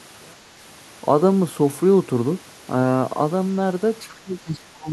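From 0.0 to 0.8 s the speech almost disappears, falling by about 34 dB and leaving only a faint residue. The likely cause is one channel inverted: the reversed-polarity channel cancels the centred speech when the stereo pair is summed to mono.

From 4.07 s to the end at 4.92 s the speech level dips, for most of that stretch, by up to roughly 20 dB. This is likely speech suppressed in double talk, where an echo canceller attenuates the near talker while both sides speak at once.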